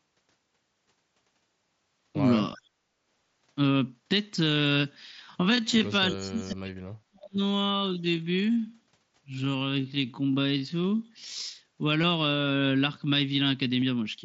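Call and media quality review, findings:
Speech suppressed in double talk: echo canceller likely misjudging near-end speech as echo and attenuating it. Voice dips at 2.54–2.64 s (about 25 dB), 6.1–7.41 s (about 40 dB, near-dropout), and 7.98–8.04 s (about 5 dB).

Time-stretched section: likely a stretch to fill a length, with pitch held by repeating short segments. From 5.18 to 11.60 s the pace slows to 0.614× with no pitch change.

Concealed Bluetooth headset packet loss: headset link dropping audio, with the receiver continuing the waveform from recent history. 15 ms gaps at 12.02 s and 13.81 s, consistent with two lost frames each, on the mSBC wideband link.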